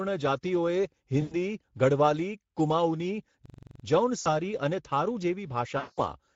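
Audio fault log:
Throughout: Speex codec. The speech sounds hoarse and grainy, with a noisy edge. The encoder had too few bits to shape the excitation accurately. The damage is plainly audible and fits a middle setting around 16.8 kbps.
1.21–1.35 s, 4.21–4.27 s, 5.77–6.00 s: VoIP packet loss concealed by the speech codec. Each gap turns into a stretched buzzy tone or coloured noise that fades away. The decoder repeated its last pitch and filter at falling gain. The sound stays weak just afterwards, because each frame builds on the last.
3.46–3.84 s: system hang loop. A 43 ms slice of sound repeats exactly about nine times, giving a rapid stutter at 23.4 Hz. The system froze while the hardware kept replaying its ring buffer, which fits a 2048-sample buffer.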